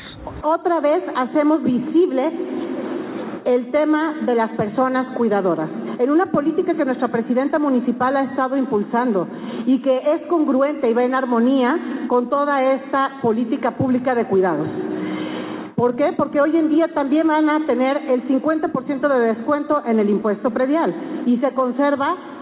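No technical faults are audible.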